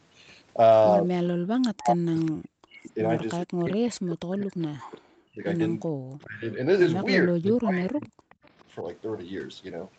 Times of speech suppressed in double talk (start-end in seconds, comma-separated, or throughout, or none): 1.70-8.85